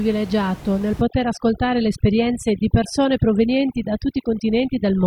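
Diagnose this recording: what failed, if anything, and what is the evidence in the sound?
From 1.01 s to the end the background drops, dotted with twinkling specks. This is overdone noise removal in call processing: the suppressor pulls down any band near its noise estimate, taking quiet speech with the room noise.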